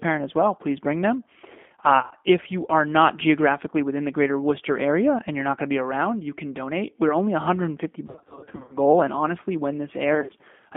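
Throughout, the speech passes through the G.729 codec at 8 kbit/s, modelling each 10 ms frame as a vocal tract filter plus sparse pulses. The line band of roughly 200 Hz to 3.5 kHz strips the highs, and the coding leaves a plainly audible rough, synthetic edge.

At 1.99 to 2.13 s, VoIP packet loss concealed by the speech codec sets in. About 100 ms of frames go missing within 0.12 s, and the decoder fills the gaps by extending its last pitch and filter at falling gain, giving a brief fading smear of buzz or coloured noise.

The same fault returns at 8.07 to 8.77 s, much heavier. About 410 ms is lost across 0.62 s in runs of up to 50 ms, so the speech repeatedly collapses into decaying buzz or noise and stays weak while the codec state recovers.

At 10.15 to 10.32 s, about 80 ms of loss within 0.14 s, with runs of up to 40 ms, brings one more short burst of dimming concealment.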